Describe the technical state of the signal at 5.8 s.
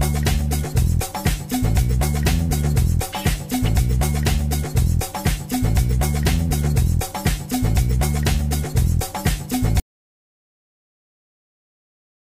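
At 5.8 s the signal is intact, with no audible fault at that moment.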